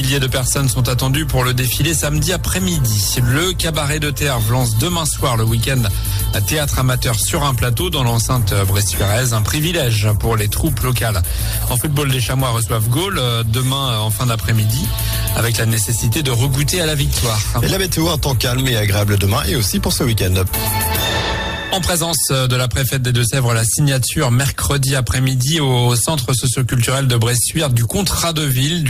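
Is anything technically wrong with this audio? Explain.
No, nothing technically wrong can be heard here.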